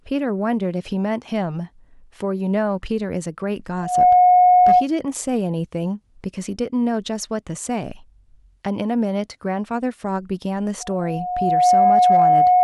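A microphone is picking up its own loudspeaker, so at 725 Hz the loop gain exceeds one: loudspeaker feedback squeal swells within a fraction of a second at 3.77–4.87 s, then builds more slowly over about a second from 10.8 s to the end, roughly 10 dB above the speech.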